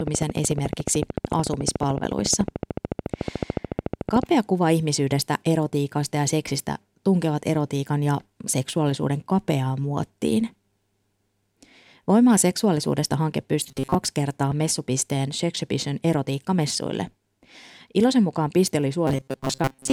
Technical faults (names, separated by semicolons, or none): train of clicks; robotic sound from repeated short buffers